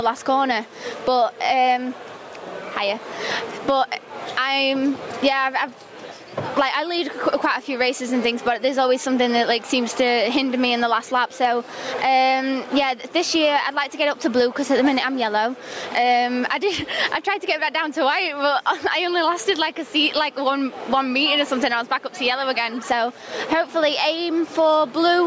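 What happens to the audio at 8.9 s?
Gain pumping is present at 8.9 s, as it is throughout the clip. The level swings by around 20 dB, leaving loud and quiet passages squashed close together. The likely cause is input gain set far too high for the microphone, with a fast limiter or compressor clamping down on every peak. The call's microphone processing trims the lowest bass and leaves nothing above 8 kHz.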